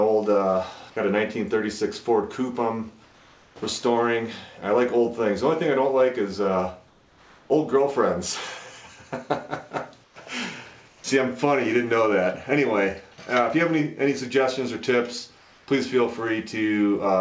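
Discontinuous transmission likely stopped sending during quiet gaps, so the receiver substituted comfort noise in place of the background at 3.04–3.56, 6.88–7.50, 10.04–10.16, 10.88–11.04 and 15.38–15.68 s. The real background, about 32 to 34 dB below the loud parts, becomes a flat, featureless hiss about 2 to 3 dB quieter, and about 7 dB quieter at 10.04 s. The call path carries nothing above 8 kHz.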